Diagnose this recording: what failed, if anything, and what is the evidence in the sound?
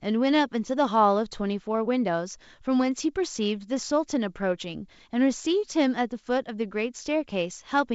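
Nothing failed in this recording.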